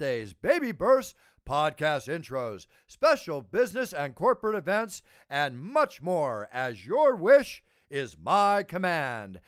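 No technical faults are audible.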